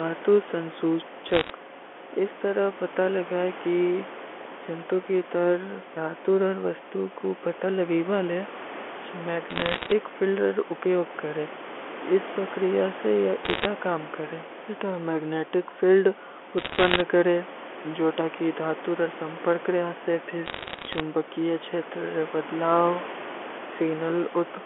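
Bit errors on a digital phone line corrupt individual G.711 samples in five bursts, at 1.28–1.50 s, 9.50–9.92 s, 13.45–13.65 s, 16.58–17.01 s and 20.46–21.00 s, with roughly one to one and a half bits in a hundred flipped. Each flipped high-order bit, or flipped sign on a loud sample, throws a single sample far off, so the speech is overlaid with sharp ticks that add up to crackle.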